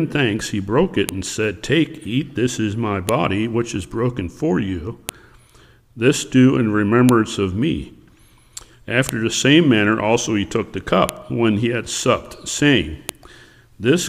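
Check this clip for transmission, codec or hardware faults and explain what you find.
A file header played as audio is present. The audio was assembled from 2-second pieces whose WAV headers were left in, so those header bytes play as samples, giving a sharp, loud click at 1.09, 3.09, 5.09, 7.09, 9.09, 11.09 and 13.09 s, regardless of the underlying sound.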